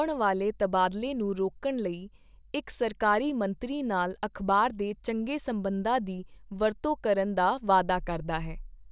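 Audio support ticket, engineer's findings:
No audio faults found in this speech clip; nothing to report in the engineer's findings for this ticket.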